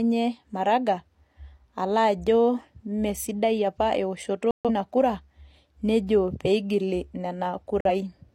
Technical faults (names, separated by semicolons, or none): corrupt frame decoded; corrupt frame muted